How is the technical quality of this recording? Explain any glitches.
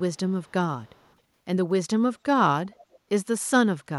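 There's a faint echo leak. Scraps of the speech come back about 266 ms late at 0.14–0.18, 0.44–0.52, 0.84–1.15 and 2.92–2.97 s, very quiet and a bit louder in the last one. It's likely a far-end speakerphone whose echo canceller let some pickup through.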